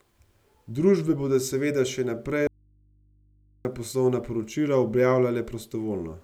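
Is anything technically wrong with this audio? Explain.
Yes. There is an audio dropout to a faint residue from 2.47 to 3.65 s, after "bodo seveda še naprej" and before "poslovna poročila". The feed was likely lost while the input stayed open, so for about 1.2 s only mains hum remains, roughly 35 dB down, and it cuts abruptly.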